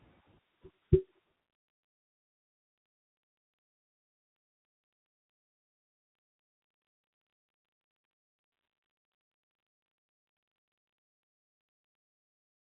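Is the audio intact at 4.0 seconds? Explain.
Yes, the audio is intact at 4.0 seconds, with the speech carried cleanly through the G.711 telephone coding, whose band stops at about 3.9 kHz.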